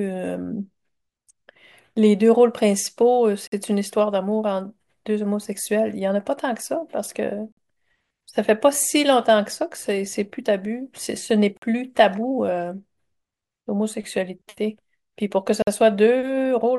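The speech was delivered in chunks of about 4 seconds, and silence was left at each join instead of butting the chunks together, a classic gap between chunks. No audio is dropped, but a hole of about 50 ms cuts in at 3.47, 7.52, 11.57 and 15.62 s. The silences arrive with the regular spacing of the chunks, giving the speech a periodic stutter.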